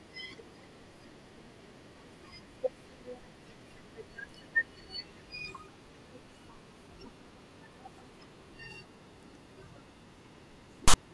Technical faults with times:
10.88-10.94 file tags played as audio

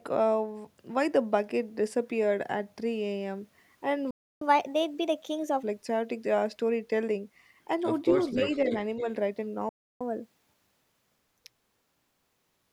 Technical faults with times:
4.11-4.41 playback stall
4.41-5.63 catch-up at higher speed
8.15-9.04 echo leak
8.33-8.45 speech suppressed in double talk
9.69-10.01 playback stall
10.01-12.63 catch-up at higher speed

